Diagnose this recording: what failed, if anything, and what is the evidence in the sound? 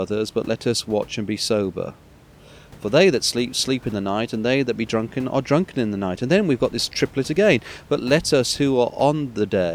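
Nothing failed in this recording; the only background is the room noise around the microphone, sitting about 25 dB below the speech.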